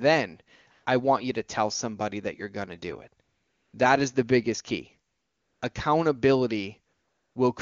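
AMR comfort noise fills four pauses: 0.71 to 0.85 s before "I want you to", 3.23 to 3.73 s after "going to do it", 5.11 to 5.61 s after "is the biggest key", and 6.93 to 7.35 s. The phone stopped sending speech frames, so the receiver substituted smooth synthetic hiss for the real background. On a spectrogram these gaps appear as flat, uniform noise blocks with hard edges.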